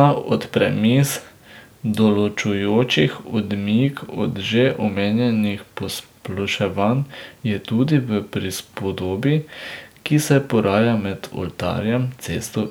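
Nothing stood out on listening to this speech recording.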